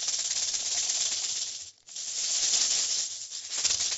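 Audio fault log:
No faults heard; call-codec band limit stops near 8 kHz.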